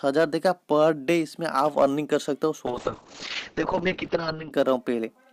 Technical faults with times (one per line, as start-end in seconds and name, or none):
2.67-4.57 call bitrate drop